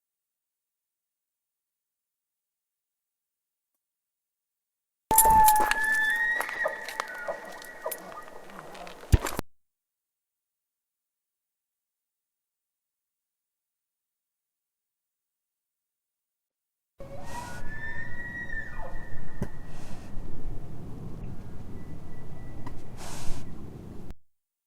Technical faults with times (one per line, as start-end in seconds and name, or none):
6.53-6.59 corrupt frame decoded
9.12-9.19 corrupt frame decoded
19.42-19.46 corrupt frame decoded
21.21-21.26 corrupt frame decoded
22.66 corrupt frame decoded
23.92-23.96 corrupt frame decoded